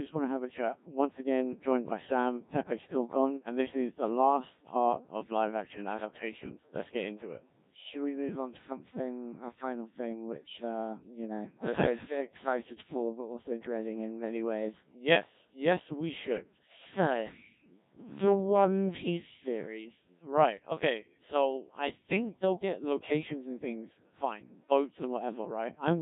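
Throughout, the speech carries Codec 2 vocoder damage, consistent with roughly 1.3 kbit/s: resynthesised from pitch and envelope alone, it sounds heavily robotic and buzzy, unlike a waveform codec's smeared, watery artefacts.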